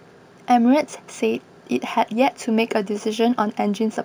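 Throughout the speech, imaging from linear upsampling is present. Straight-line interpolation filtered poorly, dulling the top of the band and leaving a mirrored copy between 8 kHz and 16 kHz, roughly 30 dB down, which fits a 16 kHz source. Sibilants carry a faint metallic shimmer.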